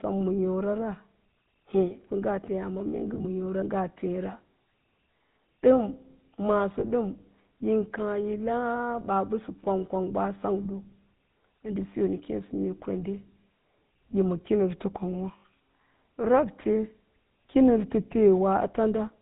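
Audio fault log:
throughout GSM full-rate codec: the speech has a plainly audible buzzy, gravelly roughness and no content above 4 kHz. The vocal tract is modelled and driven by evenly spaced pulses that keep only every third excitation sample, which fits the 13 kbps full-rate coder.
3.08–3.25 s, 6.80–6.85 s, 15.38–15.44 s lost GSM frames: the sound briefly freezes into a rough, metallic ring. At 3.08 s about 80 ms goes missing in short pieces scattered over 160 ms, none much longer than a frame. The gaps at 6.80 s and 15.38 s last 40 ms and 60 ms. The decoder fills each gap by repeating the last good frame's settings.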